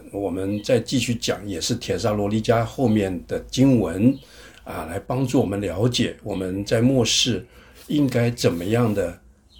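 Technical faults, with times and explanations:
0.0 to 5.06 s, low bit depth without dither: the quieter parts turn gritty and grainy, with a rough distortion that rises and falls with the sound and sits roughly 45 dB under it, then clears after 5.06 s. The likely cause is truncation to around 10 bits with no dither, so the rounding error tracks the signal instead of spreading out as smooth hiss.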